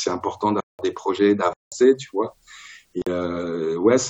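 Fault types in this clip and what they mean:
block of digital silence: sound cuts out and back with no fade; two 0.19 s holes and one 46 ms hole.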